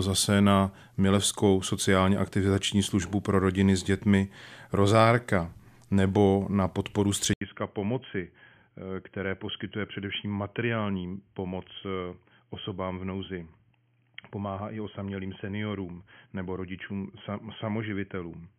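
At 7.33 s, after "nebo na podporu", an 80 ms silence falls and the speech returns boxy, with nothing above 3.2 kHz, about 10 dB quieter, over faint new background noise. That points to a likely input switched to a poorer device, since a filter alone brings no gap or noise change.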